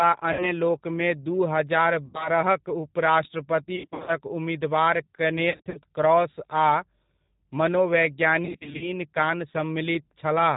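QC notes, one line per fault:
Throughout: G.729 codec. Speech is band-limited with nothing above 4 kHz, and it has a plainly audible rough, synthetic edge at 8 kbit/s. Unlike simple narrowband filtering, the buzz comes from rebuilding each frame from a vocal tract filter plus a few excitation pulses.
0.33–0.54 s, 2.06–2.30 s, 3.76–4.12 s, 5.50–5.79 s, 8.45–8.92 s: VoIP packet loss concealed by the speech codec. The first two are solid gaps of 60 and 80 ms. The later three are scattered losses of 220, 160 and 240 ms. In each, the decoder stretches the last sound into a fading buzz or coloured noise instead of leaving silence, and the voice stays weak briefly afterwards.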